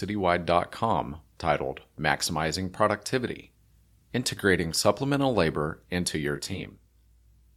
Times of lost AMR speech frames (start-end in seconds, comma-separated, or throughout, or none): none